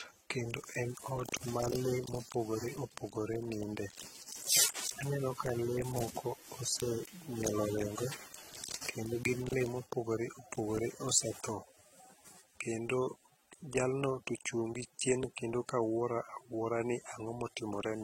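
Across the whole speech clip there is a hard ceiling at 16.2 kHz, with nothing above it. Beneath that, the different artefacts of the codecs are heard together. This is likely transcoding between lossy codecs: low-rate AAC-LC, at a bitrate that points to around 27 kbit/s, then re-encoded as HE-AAC. A single encode leaves one consistent artefact character. Here two distinct textures stack, because the second codec re-codes the first one's damage.

From 4.95 to 9.42 s, ending just before "lee ma opogoro opogore", a steady, even hiss appears, about 20 dB below the speech. This is low bit depth with dither, consistent with roughly 9-bit resolution. Without dither, the rounding error would track the signal as gritty, buzzing distortion on quiet syllables. Here the dither turns that error into constant white noise, so the speech stays clean and only the hiss floor is heard, and it stops at 9.42 s.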